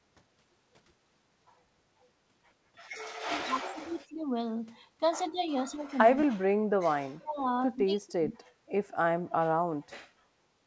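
The speech dips in five places: 3.28 to 4.26 s, 5.29 to 5.41 s, 5.63 to 7.0 s, 7.2 to 7.38 s and 7.83 to 8.47 s. The drops reach about 25, 15, 40, 35 and 30 dB. The level sinks. This is likely speech suppressed in double talk. The echo canceller mistook the talker for echo and turned the speech down. Through the G.722 call path, nothing sounds above 8 kHz.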